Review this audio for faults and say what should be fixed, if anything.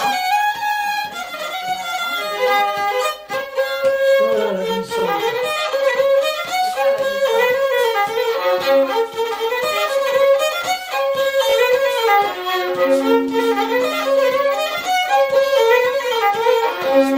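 Repeated frames at 4.99–5.03 s, 7.63–7.65 s and 11.49–11.54 s: a short block of compressed audio is decoded again, causing a brief stutter. The first repeats 40 ms once, the second 20 ms once, the third 20 ms twice, lengthening the audio. Fix the writer or transport so each frame is written or sent exactly once.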